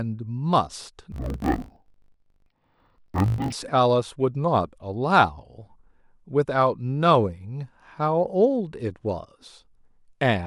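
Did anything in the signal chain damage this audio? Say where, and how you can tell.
Yes. Interleaved audio read as planar appears from 1.12 to 3.53 s, at the sample-format conversion stage. Each 20 ms block's alternating left-right samples were split into halves. That drops the speech an octave, with a 50 Hz buzz at block boundaries.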